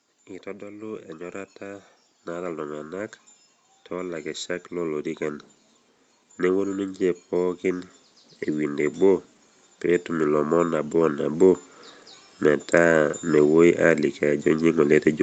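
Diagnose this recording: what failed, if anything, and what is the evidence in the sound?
The failure sits in the call processing stage: automatic gain rising. The speech and its background noise swell together four times, from 0.43 to 3.08 s by about 6 dB, from 3.88 to 5.49 s by about 3 dB, from 6.38 to 7.92 s by about 3 dB, and from 9.82 to 11.65 s by about 4 dB. The gain control judged the input too quiet and ramped its gain up over a second or more each time. On a waveform the envelope widens in slow ramps. On a spectrogram the noise floor brightens along with the speech, all under the clean band edge at 8 kHz.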